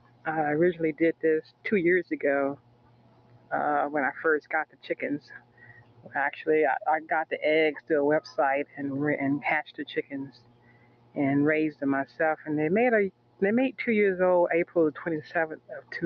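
A noise suppressor built for speech stays active across the whole clip and treats steady material as noise. Level swings of roughly 20 dB result. Held sound and decaying tails sink while attacks survive, so the audio pumps and thins.

The suppressor cuts the sound hardest at 0.00–0.27 s, 1.13–3.52 s, 4.41–6.15 s, 7.32–8.80 s, 9.67–11.17 s, 11.71–12.48 s, 13.10–13.80 s, and from 14.65 s to the end. Drops reach about 16 to 18 dB. Sustains dip sharply and tails are clipped short.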